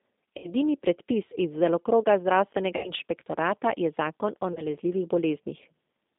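From the start the speech carries G.729 codec damage. The band runs from about 200 Hz to 3.7 kHz, which fits an 8 kbit/s G.729 stream. The codec rebuilds the speech from a filter, a pitch predictor and a few pulses. That makes it plainly rough and synthetic.

At 0.38 to 0.52 s, just before "predpis iz delokroga", there is VoIP packet loss concealed by the speech codec. About 60 ms of audio is missing, which fits two lost packets. The decoder stretches the last sound into a fading buzzy tone or coloured noise. The same happens at 2.77 to 2.91 s, just before "inšpektorata je zakon o". At 4.53 to 4.63 s, right after "inšpektorata je zakon o", a gap of about 30 ms is patched the same way.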